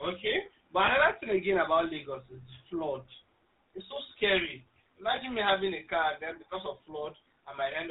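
Throughout, the GSM full-rate codec leaves a buzzy, gravelly roughness and nothing above 4 kHz, coarser than plain band-limiting because only a thinned pulse excitation survives. At 0.86 to 0.90 s, just before "another thing again about", and at 5.16 to 5.20 s, between "so scary" and "me having a car", lost GSM frames cause a brief metallic ring. About 20 ms is lost each time, which fits one missing frame. The gap is filled with repeated settings rather than silence.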